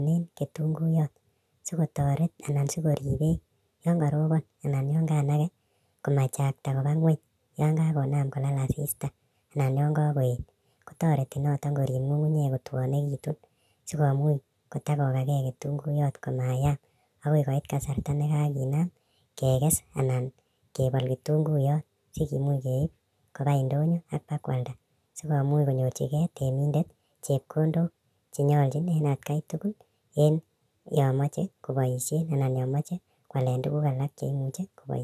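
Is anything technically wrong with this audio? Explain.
Yes. A wrong sample rate affects the speech from start to finish: it was captured at one rate and played back at a faster one without conversion, which fits material recorded near 22 kHz being read out at 32 kHz. Everything runs about 1.45 times too fast and sits about 6.45 semitones high, so the speech sounds hurried and chipmunk-like. On a spectrogram, formants and harmonics sit shifted upward and syllables look compressed in time; the waveform's envelopes are visibly shortened.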